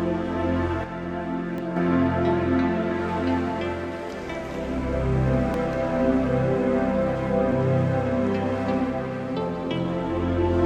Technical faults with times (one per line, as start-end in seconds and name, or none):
0.84-1.77 sudden gain jump
1.58 overlap between stream segments
5.54-5.57 overlap between stream segments
7.52-7.54 overlap between stream segments